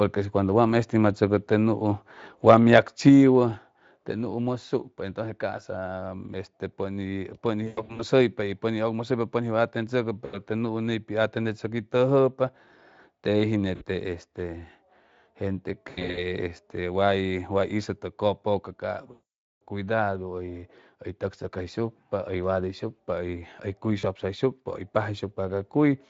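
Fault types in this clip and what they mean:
Microphone volume stepped down: the call software likely cut the input gain in single steps, so the level drops suddenly, by about 4 dB, then about 3 dB.
VoIP packet loss concealed by the speech codec: the decoder extrapolated lost packets from previous frames, producing buzzy or noisy, fading stretches, the longest lasting half a second near 19.1 s.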